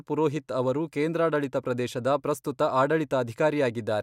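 No technical faults are audible.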